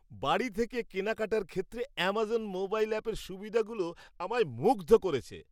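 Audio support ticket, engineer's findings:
Treble dulls and gritty noise rises from 2.14 s, right after "বাড়ি থেকে কেনাকাটার ক্ষেত্রে", persisting to clip end. Probable component: Bluetooth SBC encoder, bit pool drop. Fits bit pool halved, 28 to 14, near 108 kbps. Top sub-bands starved, rest coarsely quantised. Unlike a plain low-pass or EQ change, grit accompanies the dulling. Unlike packet loss, no gaps.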